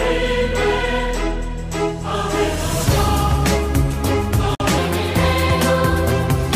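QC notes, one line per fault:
4.55–4.60 s: gap at a join of encoded pieces, a break of about 49 ms in continuous sound. Separately encoded pieces were joined untrimmed, so encoder delay and end padding sit at the seam. Unlike a dropout, the edges are codec-smeared and the sound resumes exactly where it stopped.
4.78 s to end: section at the wrong speed. The audio runs 1.27 times too fast, so it rises about four semitones and hurries at once, likely from being fitted to the wrong clock. Tempo and pitch move together, which separates this from a pitch shift.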